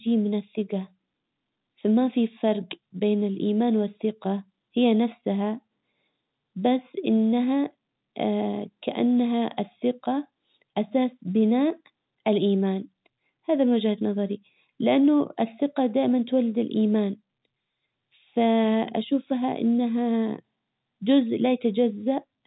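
Nothing here counts as a fault, really: the speech just sits in the familiar narrow telephone band, topping out at about 3.9 kHz as you'd expect from G.711 A-law coding at 64 kbps, with the very lowest bass trimmed away by the call's microphone processing as normal.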